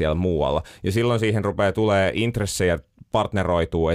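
No technical faults can be heard anywhere in the recording; the speech signal stays continuous and stable throughout.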